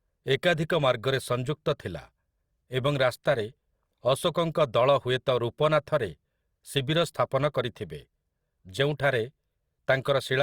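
At 10.03 s, just before the end of the speech, there is pre-echo lasting about 26 ms, up to 10.05 s. The codec's block straddled a sharp onset, so quantisation noise meant for the loud attack also spread into the quiet stretch before it. This is heard as a brief hiss leading into a softened, smeared attack. A spectrogram would show a faint broadband haze ahead of the onset edge, and the waveform a low noise floor rising before the transient.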